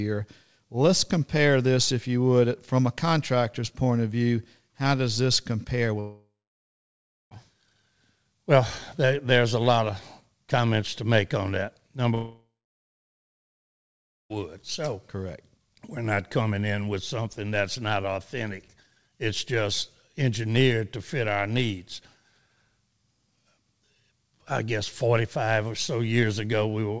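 The speech in this clip, which runs through a call path with nothing above 8 kHz, consistent with a wideband codec such as G.722, shows two long network dropouts, likely from packets stopping entirely. From 6.00 to 7.34 s about 1.3 s of audio never arrives. The receiver stretches the last sound into a fading buzz, then about 1.0 s of near-silence. From 12.15 to 14.33 s the same happens over about 2.2 s, with about 1.8 s silent, before the audio resumes with the gap simply missing.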